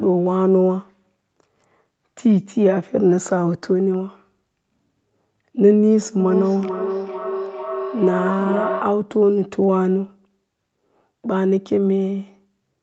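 From 6.19 s to 9.11 s a feedback howl builds up. The call's sound is reaching a loudspeaker and being picked up again, gaining level on each pass, so the repeats swell instead of fading. They narrow into a tone near 700 Hz that pulses roughly every 0.4 s and peaks about 7 dB below the speech. On a spectrogram this shows as a bright horizontal band at that pitch, striped by the pulses. In the waveform the envelope grows and throbs until it stops.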